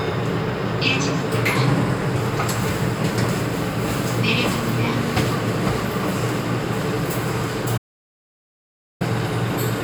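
At 7.78 s the input feed to the recorder was lost, likely through a disconnected device, a failed link or a stray mute, while the recorder kept writing silence. This is an audio dropout to silence: the sound cuts off mid-flow and the track goes silent, with no room tone underneath, until it resumes at 9.01 s. About 1.23 s of material is simply missing from the recording.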